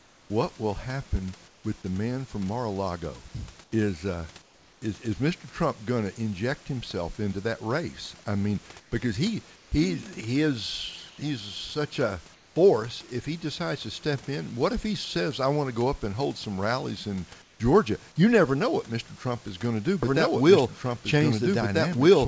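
In the pauses at 0–0.3 s, 1.48–1.64 s (between "will happen" and "with the man from"), 3.64–4.82 s (before "is is"), 8.8–9.72 s, 11.1–11.18 s, 12.34–12.56 s and 17.42–17.6 s, the room background turns into a smooth, featureless hiss, about 4 to 6 dB quieter. This is comfort noise in place of the background, likely from discontinuous transmission. Unlike gating, the pauses never go silent. The noise just loses its texture.

From 20.03 s, right after "is going to do", to the end, a doubled audio track appears. A full-band copy at roughly the same level trails by about 1.5 s. It starts abruptly and has no decay or room colour, which separates it from an acoustic echo. The likely cause is a second, delayed capture path.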